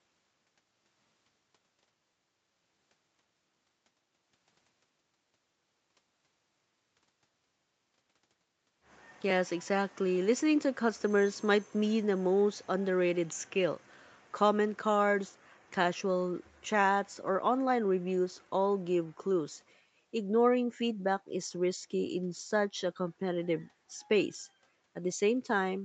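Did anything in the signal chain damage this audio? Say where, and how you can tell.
No, nothing in the signal chain damaged this speech recording. Its content stops at about 8 kHz, which fits the normal band limit of a call microphone chain and an Opus call codec running at wideband.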